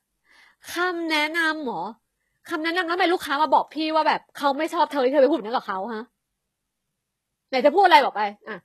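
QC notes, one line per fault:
Throughout, HE-AAC compression: the treble sounds bright but synthetic, with s sounds coming out gritty and a bit lispy, and nothing at all above about 12.3 kHz. That's likely HE-AAC at a low rate, which fits roughly 16 kbps. The lower band is coded properly, while the top end is rebuilt by copying lower bands upward under a coarse envelope. The copied harmonics don't line up with the real ones, hence the metallic edge on the speech.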